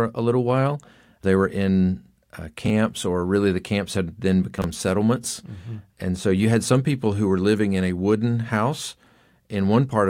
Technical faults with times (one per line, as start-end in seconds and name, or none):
2.66-2.70 chunks out of order
4.58-4.64 chunks out of order